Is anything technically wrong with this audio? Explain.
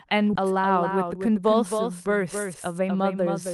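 Yes, the speech has three kinds of fault.

Throughout, there is a doubled audio track: a second, full-band copy trails about 300 ms behind at about 5 dB lower, with no room colour or decay. The likely cause is the signal being captured twice, once through a slower path.

From 0.33 to 0.44 s there is a skip ahead: the speech jumps forward almost seamlessly, and roughly 0.7 s of audio is missing. The receiver discarded that stretch while later audio was already queued, joining the two sides nearly directly.

At 0.89 to 1.36 s and again at 2.44 to 2.96 s, jitter buffer speed-up makes the speech sound hurried, running at 108% and 109% speed without any change in pitch. To shrink an overfull buffer, the receiver trimmed many short pitch-period pieces, removing roughly 50 ms each time.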